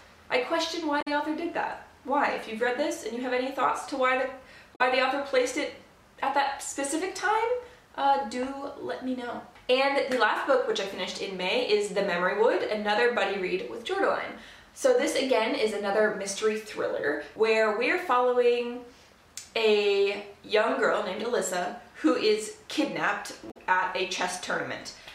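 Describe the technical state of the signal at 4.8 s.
At 4.8 s there is damaged data in the compressed stream. It runs from about 4.74 to 4.81 s, roughly 70 ms. Part of the encoded data there is wrong, so the decoder misreads or rejects those frames. It loses sync and has to hunt for the next valid frame header before playback recovers. The result is a brief chirp, squawk or blip for that short span.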